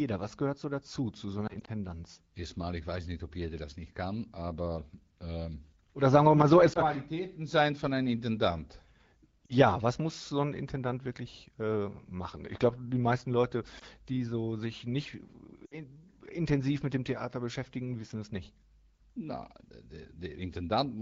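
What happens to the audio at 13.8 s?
At 13.79 to 13.84 s there is a lost AMR speech frame. One 20 ms frame failed its checksum, so the AMR-WB decoder repeated the previous pitch and vocal tract settings at lowered gain, giving a brief dip or warble just before "die so sich nicht".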